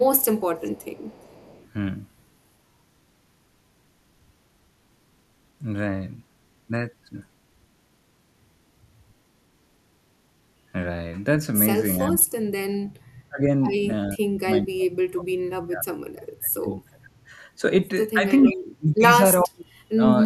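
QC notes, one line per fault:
0.21 to 0.25 s and 0.56 to 1.71 s, echo leak: a faint delayed copy of the speech trails in, first as a short scrap and then for just over a second, sitting around 30 dB under the main voice and lagging it by 413 ms. The far end is likely on a loudspeaker, and its echo canceller didn't fully strip what its mic picked up, so that residue came back to us.
12.12 to 13.42 s, 14.1 to 17.2 s, 18.13 to 19.04 s and 19.44 to 20.03 s, speech suppressed in double talk: the talker keeps getting pushed down in chunks, with the deepest dips around 35 to 40 dB, so pieces drop almost out. That's likely the echo canceller reacting to both sides speaking at once. It couldn't separate our talker from the loudspeaker echo, so it clamped down on everything for roughly a second, two seconds, and then shorter stretches near the end.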